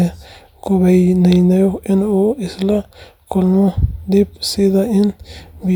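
Nothing in this bit of speech trips a technical fault anywhere along the way, so there's nothing to flag here.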